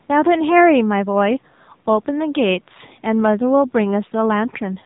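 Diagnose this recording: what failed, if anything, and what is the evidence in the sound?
Thin, buzzy speech throughout, nothing above 3.8 kHz: codec stage, AMR narrowband mobile coding, its few-pulse vocal-tract model starved at what fits a 7.4 kbps mode.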